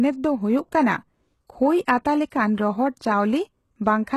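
Throughout the speech, the signal was likely passed through HE-AAC compression at a very low bitrate, fitting roughly 16 kbps. The treble is rebuilt from copied lower bands rather than coded, nothing survives above 12.3 kHz, and s sounds turn gritty and metallic.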